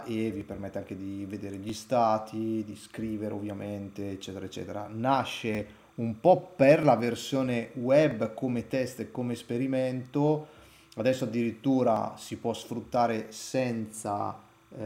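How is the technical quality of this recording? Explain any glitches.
The recording has two technical faults: a faint chirping tone running underneath everything, and a regular series of clicks.

Timecode bleed is present from start to finish. A thin, steady warble sits about 35 dB below the main sound, flipping between pitches near 1 kHz and 2 kHz with a rhythm that matches 30 frames per second. Linear timecode is a square-wave signal. Here it has leaked from an adjacent track or cable into the audio path, so its bit pattern is audible as this chirping.

Clock drift buffer slips occur from 0.41 s to 14.53 s. Around ten sharp clicks arrive at an even spacing of 1.28 s. The likely cause is two devices running on independent clocks that disagree by several hundred parts per million. The buffer between them gradually over- or under-fills until a block of roughly fifty samples is dropped or repeated. 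Each of those discontinuities lands as a tick on a fixed cycle.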